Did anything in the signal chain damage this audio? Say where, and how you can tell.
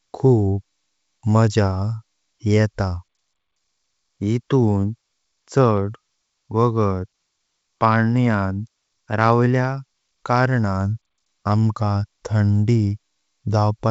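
No, nothing in the chain has damaged this speech; it sounds like ordinary G.722 wideband telephone coding, with clear speech up to about 7 kHz and only the faint upper-band hiss you'd expect from that codec at its full 64 kbit/s rate.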